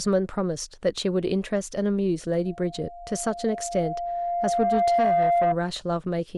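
It's a speech clip with loudspeaker feedback squeal running from about 2.45 to 5.56 s: a steady tone near 694 Hz swells over roughly three seconds until it sits a few dB above the voice, because the microphone is hearing its own loudspeaker and that frequency keeps reinforcing itself.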